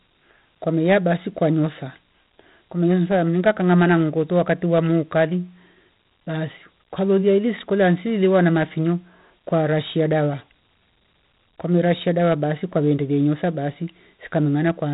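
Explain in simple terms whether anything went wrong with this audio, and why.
Something did go wrong: the whole recording, from start to finish, carries heavy 4-bit ADPCM compression damage. Each sample is stored as a tiny step guessed from the one before, so the speech picks up a gritty hiss that rises and falls with its loudness, and sharp sounds come out roughed up. Nothing above about 3.8 kHz survives, making it dull. Ordinary background hiss would stay steady through the pauses, but this grit follows the voice.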